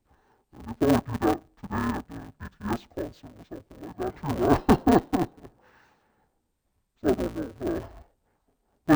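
Throughout the speech, interleaved audio is read as planar. Each 5.8 ms block is split wrongly, so it sounds dull and robotic, buzzing at 172 Hz.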